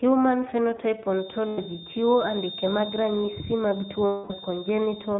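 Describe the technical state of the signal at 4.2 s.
At 4.2 s the iLBC decoder is covering a burst of lost iLBC frames from 4.06 to 4.33 s, about 240 ms, which fits a run of twelve 20 ms frames. It repeats the last pitch cycle mixed with noise, so the speech becomes a held, slightly buzzy, breathy vowel, then recovers almost immediately.

Beneath that, the whole signal passes through the iLBC codec at 15.2 kbps with 20 ms frames. Band-limiting removes everything above 4 kHz, and excitation coding leaves the speech audibly rough and synthetic.

A steady 3.6 kHz tone runs from 1.04 s to the end of the clip. This is likely a feedback whistle from a loudspeaker-to-microphone loop held just short of runaway. It sits well below the speech as a thin, slightly wavering whistle.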